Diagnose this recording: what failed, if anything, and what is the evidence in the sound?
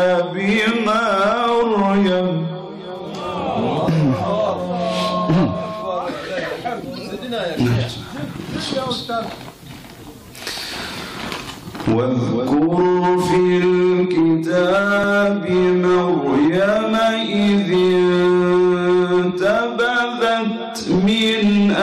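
Overlap between stream segments at 15.04 to 15.06 s, a streaming-stage fault. The player trimmed about 20 ms at a 6-second segment boundary, leaving a tiny skip where the waveform jumps.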